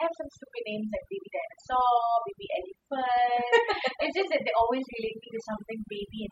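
From start to finish the speech carries overdone noise removal: a noise reduction process pushed too hard, so any frequency band sitting near its noise estimate is driven down or switched off, taking the softer parts of the voice with it. The background drops and breaks up into twinkling specks. Unlike a noise gate, which cuts everything at once, this works band by band.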